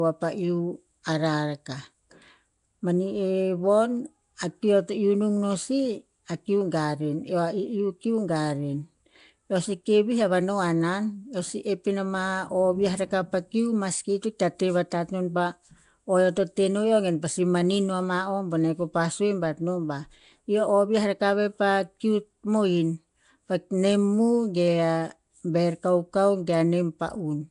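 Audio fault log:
Throughout, Nellymoser compression: the speech has a rough, hissy halo and a smeared, underwater quality, and nothing is present above 10.6 kHz. The likely cause is the old Flash microphone codec, Nellymoser Asao, which gives each short block very few bits, so weak bands are filled with noise. The plainly audible damage fits a rate near 44 kbps. A spectrogram shows a hard ceiling at 10.6 kHz and grainy, speckled noise between harmonics.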